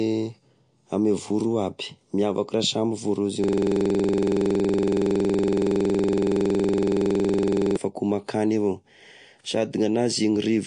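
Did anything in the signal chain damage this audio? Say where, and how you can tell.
Yes. MP3 compression runs through the whole clip: nothing is present above 9.8 kHz, and the codec damage is plainly audible on the speech. That fixed treble ceiling and the audible artefacts fit a low-bitrate encode, around 48 kbps, most likely at the codec stage. With too few bits, the encoder zeroes weaker frequency lines and cuts the top of the spectrum, so detail in the speech is discarded rather than carried.

A system hang loop occupies 3.44 s to 7.77 s. A single 46.4 ms slice of audio repeats exactly, over ninety times, producing a rapid mechanical repetition at 21.5 Hz in place of continuing speech. That loop length fits a 2048-sample buffer, which points to the driver or buffer stage. The host stopped supplying new audio while the hardware kept replaying the same ring buffer until the system recovered.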